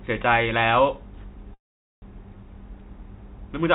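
A speech clip that stalls in a call audio freeze from 1.54 to 2.04 s: the last sound trails briefly, then about 0.45 s of near silence, and the speech resumes exactly where it stopped, half a second late. That is the mark of a freeze rather than packet loss. Nothing is cut out; a gap is inserted. The likely cause is delayed packets draining the jitter buffer. The band stops at 4 kHz, which fits a 64 kbps G.711 A-law call path.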